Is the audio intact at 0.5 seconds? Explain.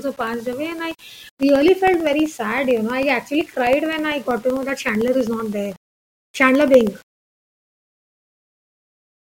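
No. At 0.5 seconds the speech carries a grainy, rough texture that shifts with the sound itself, turning gritty on quieter passages, with the error sitting around 30 dB below the signal. This is low bit depth without dither, and it runs through the whole clip. The likely cause is that the audio was rounded to very few levels, consistent with about 8 bits, with no dither, so the rounding error tracks the signal instead of forming a steady hiss.

The same moment also falls inside a run of periodic USB or driver dropouts, heard as small regular ticks that occur only while sound is present. They begin at 0.08 s and continue to 9.24 s, repeating every 0.064 s, about 16 times a second. Each time, a brief background stall on the bus or driver drops a tiny slice of audio, roughly half a millisecond, and fills it with silence. That sudden gap in the waveform produces the click.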